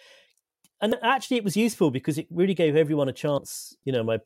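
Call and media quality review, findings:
Damaged data in a compressed stream, 0.92 s, just before "actually it was useful": brief glitch. Decoder misreads corrupted frame bytes, loses sync, resyncs at next frame header.

Same fault, 3.37 s, right after "really gave everyone a": short glitch, under 20 ms. Corrupt compressed data in transport or storage, decoder drops and resyncs.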